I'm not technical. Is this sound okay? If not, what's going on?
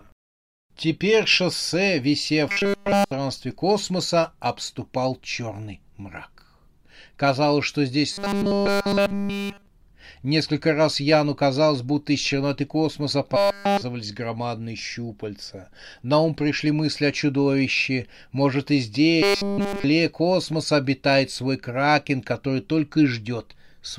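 No. The speech turns into a flat, metallic 200 Hz buzz four times: 2.49–3.11 s (before "космоса обступал черный"), 8.12–9.68 s, 13.36–13.82 s (between "будто из черноты космоса" and "громадные щупальца"), and 19.23–19.84 s (before "космоса обитает свой кракен"). This is robotic sound from repeated short buffers, likely caused by the player looping tiny 5 ms snippets while the real audio lagged behind.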